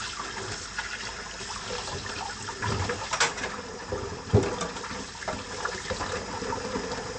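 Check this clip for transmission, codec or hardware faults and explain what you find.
One fault runs through the whole clip. It is MP3 compression, and the damage is plainly audible. From start to end, nothing sounds above 8.3 kHz. The top octave is simply gone. The likely cause is an encoder short of bits, which fits a low rate near 48 kbps. It cuts the treble at a fixed point. It also drops weak frequency lines, and they flicker in and out between frames. The result is a dull, watery, swirling texture.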